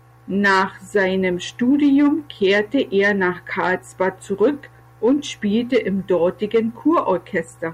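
No technical faults can be heard anywhere in the recording; the speech signal holds steady throughout, with no interruptions or damage to the audio path.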